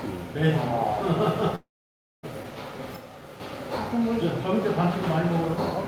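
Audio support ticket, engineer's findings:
Audio cut at 1.55 s: brief fading buzz or hiss, then silence until 2.25 s; about 0.68 s missing on resume. Likely long network dropout, receiver concealment running out.

Abrupt level drop of about 6 dB, 2.96–3.40 s, in the mono sum. Likely one channel drops out, leaving only the surviving side.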